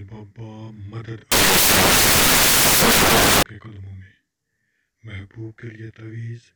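Samples built from the wrong bytes take over from 1.32 to 3.43 s. In that stretch the bytes of each sample are assembled wrongly, so the rapidly varying low-order bits become the dominant part of every value. The audio turns into loud, harsh broadband noise.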